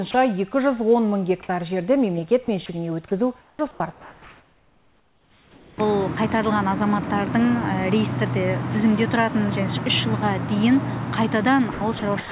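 At 0.11 to 0.14 s, the sender's voice detector likely classed the sound as background and stopped transmitting, causing sound dropped by the voice detector. For 30 ms the receiver filled the gap with comfort noise, so the sound briefly gives way to steady noise or near silence.

Sound chopped by the voice detector likely follows, with the detector repeatedly toggling transmission. At 2.45 to 2.69 s, about 60 ms is swapped for comfort noise. At 3.41 to 5.78 s, 2.13 s is replaced, with the sound broken up. At 11.72 to 12.31 s, 240 ms is replaced the same way. All of this is heard through the G.711 call path at 64 kbps, with nothing above 4 kHz.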